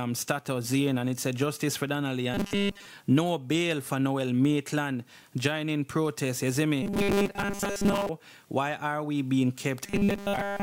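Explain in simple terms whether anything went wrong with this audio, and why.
Audio likely arrived too slowly, so the player kept replaying tiny 5 ms snippets. This is robotic sound from repeated short buffers, a stiff 200 Hz buzz at 2.34–2.86 s, 6.83–8.09 s and 9.84–10.62 s.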